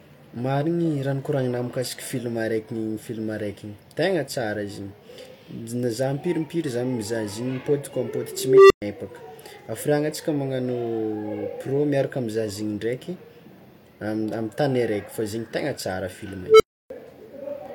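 At 8.33 s a tone near 400 Hz rises out of the speech, swells over about 0.37 s into a harsh, clipped squeal, then drops to silence for about 0.12 s, ending at 8.82 s. At 16.44 s the same tone returns, peaks faster, in about 0.16 s, and leaves a silence of about 0.30 s before 16.90 s. Both are an unstable filter: bad coefficients made a recursive filter feed back without limit until its values overflowed and it reset.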